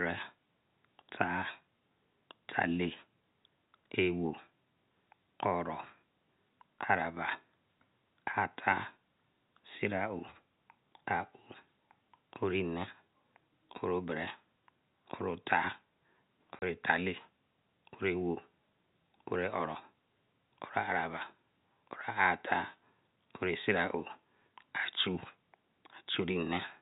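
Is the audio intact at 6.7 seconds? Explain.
Yes, the audio is intact at 6.7 seconds, with the speech carried cleanly through the G.711 telephone coding and its band limited to below 4 kHz.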